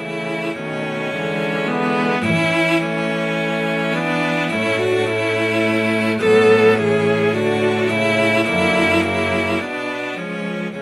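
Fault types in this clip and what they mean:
No faults can be heard anywhere in this recording.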